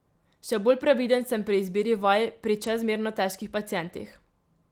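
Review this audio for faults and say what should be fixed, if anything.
No faults turn up in this review, so nothing needs to be fixed.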